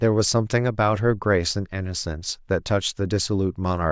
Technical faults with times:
none

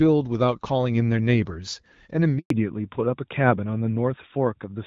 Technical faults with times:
2.38-2.50 handover gap
2.50-4.87 fallback to narrowband

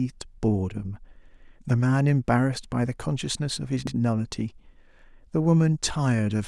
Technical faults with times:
1.28-1.37 overlapping chunks
3.87-3.96 overlapping chunks

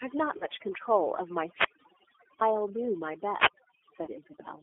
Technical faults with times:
0.00-4.62 overdone noise removal
0.00-4.62 G.729 codec
0.38-0.45 VoIP packet loss concealed by the speech codec
1.45-2.42 wireless microphone squelch dropout
4.04-4.09 VoIP packet loss concealed by the speech codec

